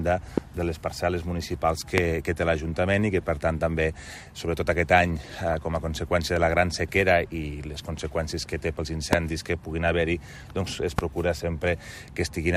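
Right at the start there's a loud pop from 0.38 to 0.40 s, about 20 dB above the programme, and another from 1.98 to 2.00 s that hits harder, about 25 dB up. Each is a single sharp thump lasting barely a couple of hundredths of a second, with the audio carrying on underneath. That's a voltage spike landing on the signal, likely from a switch, a plug or a static discharge, and the downstream circuitry rounds it into that short thud.

From 5.32 to 5.54 s you get DAB burbling, a brief burbling patch sitting over the sound. The reception was weak enough that bit errors slipped past the error correction into the MP2 data. The span fits roughly nine frames, and the error rate was fairly low, somewhere near a tenth of a percent, which is why it stays a short gurgle and doesn't break up completely.

The pops come back later. One at 9.13 to 9.15 s is again about 25 dB up, and a last, slightly softer one at 10.99 to 11.01 s is about 20 dB. 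They sound like the first two, single sharp thumps on top of the sound, with likely the same spike mechanism behind them.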